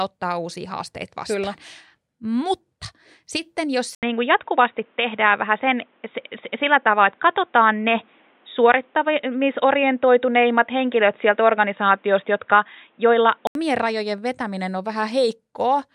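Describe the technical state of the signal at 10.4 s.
At 10.4 s the audio sits inside an input-switched-to-a-poorer-device span (3.95 to 13.55 s, after "sitten jos" until "rajojen vetäminen on"), likely a change to a narrower-band microphone. It sounds dull and boxy, with a level shift of about 5 dB and a faint new noise floor. A spectrogram shows energy cut off above 3.8 kHz, and the waveform shows an 80 ms gap at the switch.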